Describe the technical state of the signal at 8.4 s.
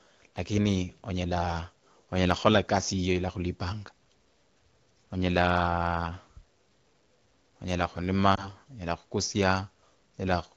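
Right around 8.4 s you've got a lost AMR speech frame, with the disturbance running from about 8.35 to 8.52 s. A radio error wrecked the frame's checksum, so the decoder filled the gap by reusing the last good pitch and vocal tract settings with the gain pulled down. It sounds like one quick dip or warble that points to a single dropped 20 ms frame, set in otherwise clear wideband audio consistent with the 12.65 kbit/s mode.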